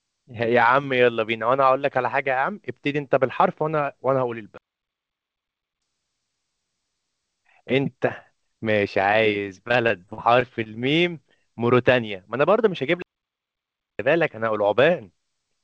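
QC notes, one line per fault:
4.58–5.82 s, playback stall: the speech cuts out mid-flow and the output sits silent for about 1.24 s before carrying on. The likely cause is the player running dry of data or its thread being blocked, so nothing reached the output until it recovered.
9.68–10.67 s, repeated packet loss (robotic sound): choppy speech with bits missing, from seven gaps of up to 44 ms each. Each hole was patched by stretching the last sound onward, and about 15% of this stretch is concealment rather than real audio.
13.02–13.99 s, playback stall: a second dead stop, about 0.97 s of silence breaking the speech before it resumes. Again the likely cause is the player starving for data or being held up, leaving the output empty until playback recovered.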